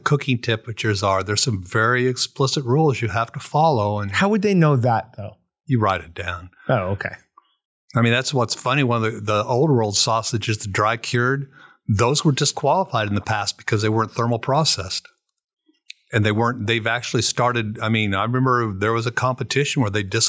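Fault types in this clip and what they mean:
No fault types are present in this clip.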